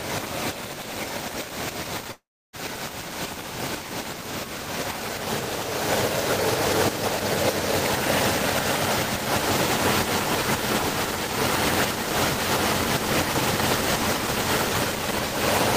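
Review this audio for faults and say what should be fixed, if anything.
From 2.11 to 2.56 s, a fading buzz then 300 ms of silence, likely a long network dropout. Unlike a short packet loss, 420 ms is skipped. A more robust network link with redundancy or retransmission would prevent it.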